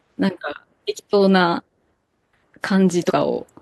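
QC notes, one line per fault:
2.09 s, compressed frames skipped: about 300 ms of the speech is missing, and the sound lurches forward. The jump fits roughly seven whole codec frames of 42.7 ms that the decoder never played.
3.07–3.11 s, compressed frames skipped: a smaller jump of about 100 ms, consistent with two dropped frames.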